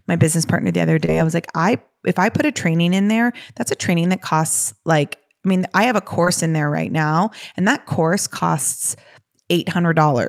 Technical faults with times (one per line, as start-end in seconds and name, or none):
1.05-1.10 short concealed packet loss
6.24-6.28 short concealed packet loss
8.38-8.42 short concealed packet loss